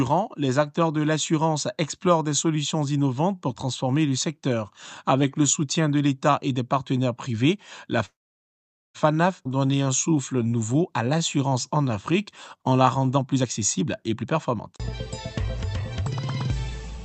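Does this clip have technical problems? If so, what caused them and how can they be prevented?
Yes. From 8.05 to 8.96 s there is a call audio freeze: a brief fading continuation, then about 0.84 s of silence. It was likely caused by delayed packets draining the jitter buffer. Unlike a skip, nothing is lost; the audio resumes where it stopped. A steadier network path or a larger jitter buffer margin would prevent it.

At 9.44 to 9.47 s a skip ahead drops roughly 0.4 s and joins the two sides almost directly. Unlike the freeze, material is missing rather than paused. Avoiding packet loss and buffer overflow prevents this.

Jitter buffer slow-downs run from 9.48 to 12.17 s at 91% speed and from 12.57 to 13.05 s at 90%, as repeated pitch periods stretch the sound without lowering its pitch. Stable packet timing keeps the buffer from running low.

Jitter buffer speed-ups from 13.10 to 14.79 s at 122% and from 15.48 to 16.97 s at 108% remove short pitch periods, so the sound hurries at unchanged pitch. 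This is the opposite of the slow-down. Reducing bursty packet arrival prevents the excess buffering.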